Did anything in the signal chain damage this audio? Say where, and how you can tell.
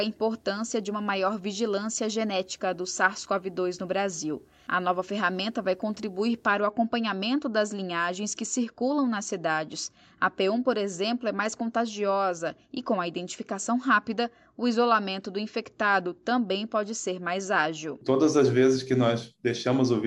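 Yes: video or display buzz coupled into analogue wiring from 0.0 to 6.55 s, a 75 Hz field-rate buzz roughly 40 dB down, with harmonic lines and hash on a spectrogram.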